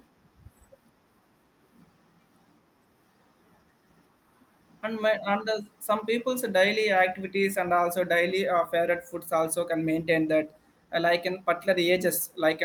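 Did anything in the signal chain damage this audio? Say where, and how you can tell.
No, nothing in the signal chain damaged this audio.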